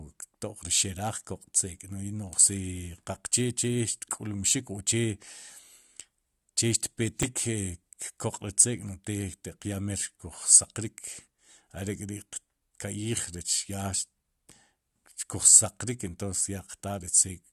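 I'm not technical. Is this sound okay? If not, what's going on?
No. At 7.23 s the speech has a tiny click, almost a brief buzz, lasting only a few thousandths of a second. This is a repeated buffer: the playback device ran out of fresh audio for a moment, so it played the last small piece it had a second time. That piece is only 5.33 ms long, which fits a 256-sample buffer, so the repeat is too short to hear as a stutter. Roughly five milliseconds of the real sound are missing there.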